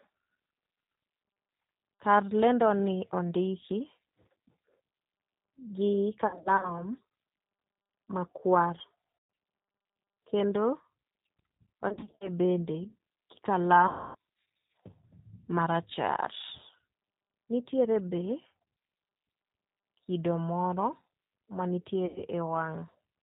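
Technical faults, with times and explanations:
Throughout: G.729 codec. The signal passes through an 8 kbit/s G.729A coder that rebuilds speech from a vocal tract filter, pitch predictor and sparse pulses, and cuts everything above 4 kHz. The speech sounds muffled, slightly rough and synthetic, with plainly audible coding damage.
6.27–6.88 s, 9.18–9.30 s, 11.89–12.29 s, 13.87–14.15 s, 22.06–22.22 s: VoIP packet loss concealed by the speech codec. The decoder fills gaps of 180, 120, 200, 280 and 100 ms (the first and third scattered, runs up to 60 ms) by extrapolating and fading, so speech turns buzzy and weak before recovering.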